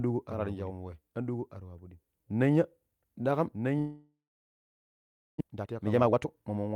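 Speech runs throughout with a second, full-band copy trailing about 1.5 s behind at about 5 dB lower, likely a doubled audio track; the spectrogram shows every pattern repeated, shifted right. From 3.79 s to 5.42 s the sound smears into a fading buzz, then falls to near-silence for over a second, a flat gap in the waveform, with about a second of audio never returning, likely a long network dropout. From 5.44 s to 6.71 s a jitter buffer speed-up plays the speech at 141% speed with unchanged pitch, trimming around half a second, so harmonics stay level while syllables crowd together.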